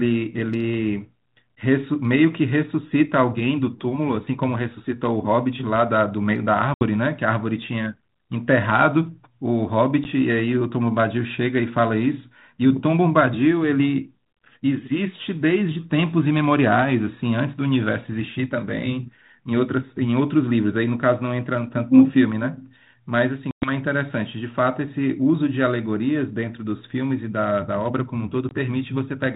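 A speech recording over a band-limited ADPCM line, whose light codec hiss fits 32 kbit/s G.726, is broken by packet loss on an ADPCM call: hard-edged silent holes at 6.74 s (70 ms), 10.04 s (10 ms), 23.51 s (110 ms, about ten packets) and 28.49 s (20 ms). Unlike a plain dropout, speech returns slightly distorted for some tens of milliseconds, as the decoder's predictor and step size resynchronise.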